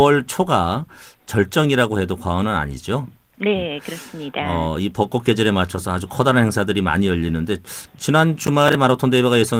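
Processor overload crackle runs from 8.44 to 8.75 s, near the end of the speech. For about 0.3 s the processor falls behind and misses a cluster of short audio buffers, each around 10 ms long. Every missed deadline is filled with a stale piece of earlier audio spliced in with hard edges. The repeated fragments and abrupt joins pile up into a short burst of gritty, tearing crackle over the speech, which stops once the load eases.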